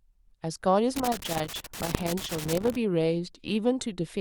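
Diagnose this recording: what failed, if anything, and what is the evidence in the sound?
Irregular scratching and crackle runs from 0.96 to 2.76 s, a loose connector crackle in the analogue wiring, where a worn contact repeatedly breaks and chops the signal.

A single sharp bang at 1.95 s is invalid numbers at full scale in processing: a bad calculation pinned one block, which fits a 64-sample block, to one extreme value.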